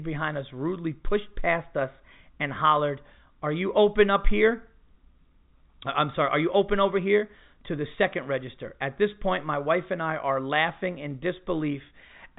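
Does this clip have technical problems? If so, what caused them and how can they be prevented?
No, there are no technical problems in this speech recording. It has passed through G.711 telephone coding, which is why nothing above about 3.8 kHz is heard, and that band limit is simply how the format works.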